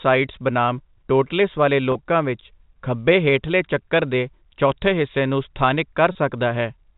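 At 1.92 s, after "ਬਨਾਮ ਟੋਟਲਿਸ ਵਾਲੇ", and at 6.12 s, after "ਚੌਥੇ ਹਿੱਸੇ ਨੂੰ ਸਥਾਨਿਕ", packet loss with pitch repetition fills a 30 ms gap, consistent with a single lost packet. The repeated pitch period gives a briefly held, buzzy tone. The waveform shows identical cycles, and the spectrogram shows flat harmonics under the telephone-band ceiling.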